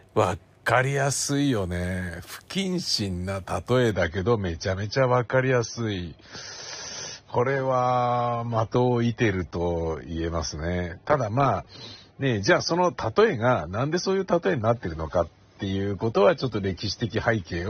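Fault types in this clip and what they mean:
Adaptive stream at a lower bitrate: the player switched to a lower-bitrate version at 3.90 s with no gap, and from there the speech loses everything above 6.3 kHz.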